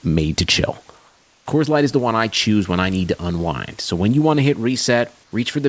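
A speech recording in which the room background is twice replaced by comfort noise, from 0.98 to 1.46 s and from 5.24 to 5.32 s. In those pauses the textured room noise gives way to a flat, featureless hiss about 2 dB and 3 dB quieter, likely from discontinuous transmission with receiver-generated noise. Unlike a noise gate or dropout, the pause never goes silent. A smooth substitute fills it, and the band ends near 8 kHz throughout, consistent with G.722.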